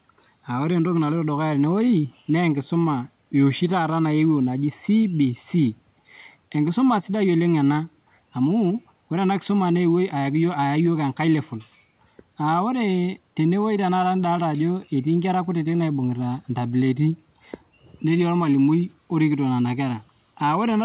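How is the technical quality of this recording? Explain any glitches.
The technical quality of this recording holds up, with no glitches to explain, and its call-line bandwidth stops at about 4 kHz.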